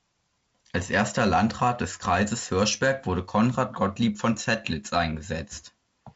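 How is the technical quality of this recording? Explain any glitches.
There are no glitches in this speech recording: it comes through intact as G.722 wideband telephone audio, with content reaching up to about 7.7 kHz and the light coding texture typical of the codec's lower bitrate modes, which fits 48 kbit/s operation.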